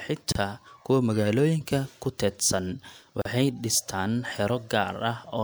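Separately encoded pieces of this speech were joined without trimming the encoder's start-up delay and last-frame padding, leaving a gap at a join of encoded pieces twice. From 0.32 to 0.35 s the speech drops into a 31.8 ms silence, and from 3.22 to 3.25 s a 36.5 ms one. Each hole has its edges smeared by the codec, then the speech resumes exactly where it broke off.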